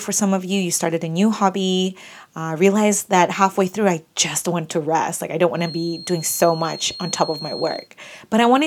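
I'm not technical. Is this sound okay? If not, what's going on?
No. From 5.52 to 7.90 s, just after "I don't", a thin whistle at one pitch near 4.2 kHz, swelling and fading slowly, sits well below the speech. This is a feedback whistle, likely the loudspeaker's sound leaking back into the microphone, which keeps one high pitch ringing without growing into a howl.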